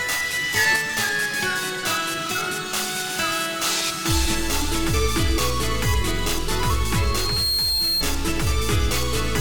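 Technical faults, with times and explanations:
0.56 to 0.76 s, sudden gain jump: The level steps up by about 4 dB with no fade. The background noise rises with the wanted sound, so the whole mix changes level together rather than one source getting louder. The likely cause is a digital gain setting applied in a single sample without a ramp. The abrupt step in the waveform is what makes the change sound so sharp.
6.96 to 8.06 s, loudspeaker feedback squeal: A single tone at 4.2 kHz appears and swells over about half a second. It reaches roughly the same level as the rest of the sound. A microphone is picking up the loudspeaker it feeds. At this frequency the loop gain is above one, so each pass round the loop makes the tone louder. That self-reinforcing growth is why it rises on its own into a squeal and then stays.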